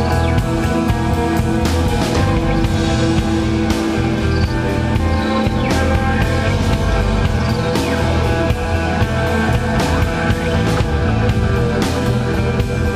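At 8.17 s compressed frames are skipped: roughly a single frame, about 20 ms of audio, never reaches the output, so the sound jumps forward.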